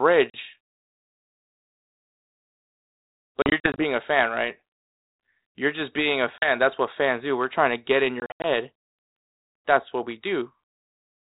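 Speech carried over a G.726 ADPCM link, which fits 32 kbit/s, shows packet loss on an ADPCM call. Hard-edged silent gaps appear at 0.3 s (40 ms), at 3.42 s before "a fan right" (140 ms scattered over 0.36 s), at 6.38 s after "just being a" (40 ms), and at 8.2 s after "trying to get in" (160 ms over 0.24 s). After each gap the decoder's predictor and step size no longer match the sender's. The sound returns slightly distorted.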